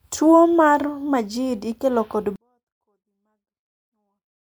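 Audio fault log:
2.36–4.43 s, 24-bit alignment error (too quiet): right after "ikelo kod" the speech drops by about 48 dB at once and stays clean but nearly inaudible to the end. The 24-bit samples sit in the low bytes of each 32-bit word, and reading them as full 32-bit integers scales everything down.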